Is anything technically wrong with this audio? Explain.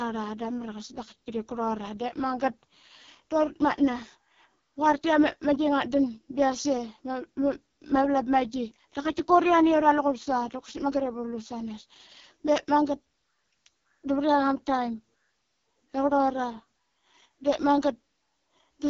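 Yes. Throughout the speech sounds rough and raspy, with nothing above 7 kHz. This is AMR wideband (HD Voice) codec damage, heavy enough to fit its lowest 6.6 kbit/s mode, where the pulse-driven vocal tract model gets too few bits to shape each sound cleanly.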